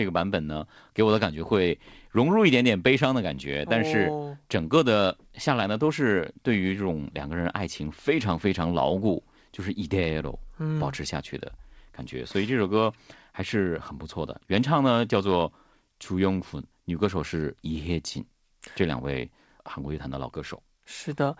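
There are no technical faults to describe in time order in this speech, which comes over a normally working G.722 call path with nothing above 8 kHz.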